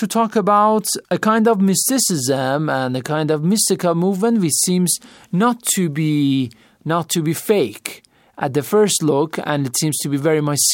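No technical faults can be heard at any point in the recording.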